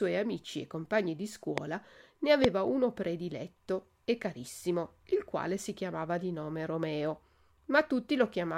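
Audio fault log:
1.58–1.60 s and 2.44–2.47 s, loud pop: two short, sharp pops land on top of the speech, each lasting about 20 ms. The first jumps roughly 20 dB above the talking, and the second is a bit harder at around 25 dB. The speech carries on right underneath both. The likely culprit is a sudden voltage step or spike, from something like a plug, a switch or static, getting into the signal path and being shaped into a quick click.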